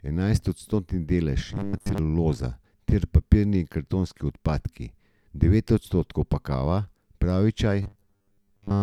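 Robotic sound from repeated short buffers appears from 1.49 to 1.98 s, right after "odstotni delež", and again from 7.83 to 8.83 s, following "pa kava pravi čaj". The likely cause is audio arriving too seldom, so the player keeps looping a 10 ms slice for most of each stretch while the real signal is skipped. That loop imposes a fixed 100 Hz buzz, turning the speech metallic and rigid while it still loosely tracks the words.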